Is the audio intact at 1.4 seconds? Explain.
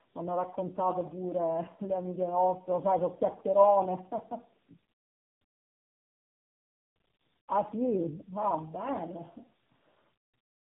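No. At 1.4 seconds the speech carries tandem speech coding, which runs through the entire clip rather than starting or stopping there. The sound points to the call passing through three low-rate speech codecs in a row, ending in AMR-NB at 7.95 kbit/s, each one decoding and re-encoding the previous coder's already damaged output. The errors compound, so the speech sounds rough, muffled and warbly, with nothing above 3.9 kHz.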